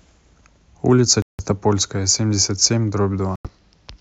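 At 1.22 to 1.44 s and again at 3.36 to 3.49 s the speech cuts to silence, then resumes further along, likely a Bluetooth dropout from late packets.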